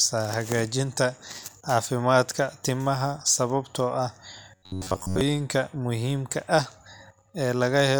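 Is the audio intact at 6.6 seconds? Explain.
Yes, at 6.6 seconds the audio is intact, with no fault present at that moment.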